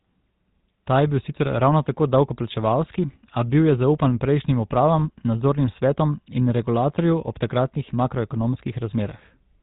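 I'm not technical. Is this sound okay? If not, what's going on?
No. The whole speech clip sounds buzzy and gravelly, like an old mobile phone call, with nothing above about 3.8 kHz. This is the GSM full-rate codec, which rebuilds the voice from a simple pulse-driven model and throws away detail.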